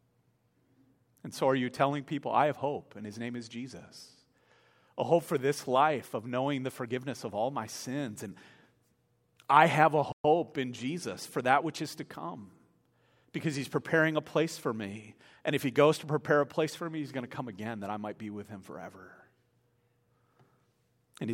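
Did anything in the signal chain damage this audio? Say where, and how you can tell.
Yes. A playback stall sits in this speech clip at 10.12 s: the output drops to silence mid-flow for about 120 ms, ending at 10.24 s, before sound returns. This belongs to the playback stage. The likely cause is that the player's buffer ran dry or its audio thread was blocked, so nothing was delivered to the output until the data supply or thread recovered and playback continued.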